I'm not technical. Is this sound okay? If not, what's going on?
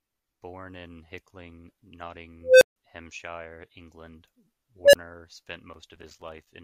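No. An unstable filter misbehaves at 2.41 to 2.76 s and again at 4.84 to 4.95 s: a processing step feeds back on itself, so a beep around 500 Hz swells within 0.2 s (then 0.09 s), distorts, and cuts to silence for 0.15 s (then 0.02 s).

Processor overload crackle runs from 5.74 to 6.47 s: the computer falls behind and misses roughly twenty tiny chunks of sound, each replaced by a hard-edged gap, which fits chunks of about 5 ms. Together these gaps sound like gritty crackling over the speech.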